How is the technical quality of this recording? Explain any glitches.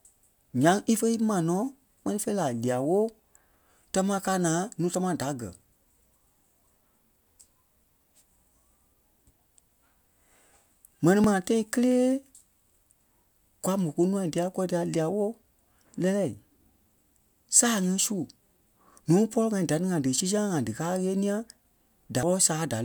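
The speech has four small skips, at 4.95, 11.24, 20.20 and 22.23 s, each a jump ahead. The likely cause is a dropped buffer (overrun): samples got overwritten before being read, losing about 20 ms each time, and nearer 70 ms at the last one.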